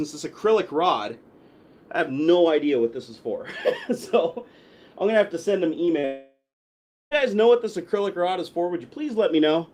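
At 5.85 to 5.89 s, and again at 5.99 to 6.05 s, the sound briefly smears or wobbles. These are short concealed packet losses. About 20 ms and then about 40 ms of the stream failed to reach the decoder in time. The receiver bridged each hole by extending the preceding sound, as a pitched continuation or as shaped noise, before blending back into the real signal. That patching is what makes the moment sound smudged.

Right after the second gap, from 6.05 to 7.13 s, the sound stretches on as a decaying buzz or hiss, then drops to silence for about 0.72 s before resuming. The resumed sound does not pick up where it stopped, because roughly 1.06 s of material is simply absent. This is most likely a long network dropout. The receiver kept extending the last sound until concealment gave out, and the missing audio was never played.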